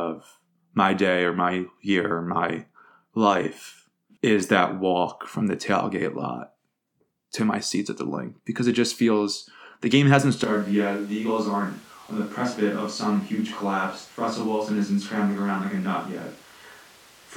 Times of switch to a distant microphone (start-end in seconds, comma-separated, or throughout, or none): 10.44-17.36